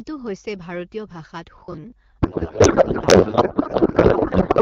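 From 1.58 to 1.92 s the sound hardens into a rigid, metallic buzz at 50 Hz that only loosely tracks the speech: robotic sound from repeated short buffers. Audio likely arrived too seldom, so about half of this stretch is the previous 20 ms replayed while real audio was skipped.

At 2.22 s the speech collapses into garbled noise and warble that barely follows it, lasting to the end of the clip. This is a codec payload misread: octet-aligned AMR frames were decoded as bandwidth-efficient, so the AMR-WB decoder found every field shifted.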